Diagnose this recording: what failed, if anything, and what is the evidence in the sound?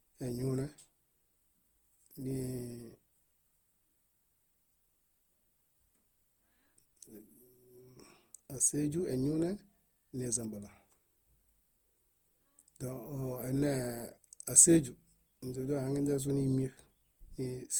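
Codec stage: the speech sounds swirly, hollow and smeared throughout, with blurred attacks, beyond what its Opus bitrate explains. This is likely generation loss from about five encodes.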